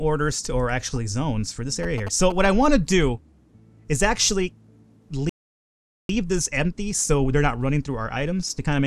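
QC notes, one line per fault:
1.83–2.47 s, GSM signalling bursts: a nearby 2G phone's short radio bursts get rectified, so you hear galloping ticks and 217 Hz buzz, roughly 10 dB under the audio.
5.29–6.09 s, playback stall: the sound just stops for about 0.8 s in mid-flow, most likely the player running dry or its thread getting blocked, before picking back up.
6.09–8.86 s, time-compressed catch-up: the player clears its backlog at 1.15x by cutting and cross-fading small slices, so it sounds rushed at normal pitch.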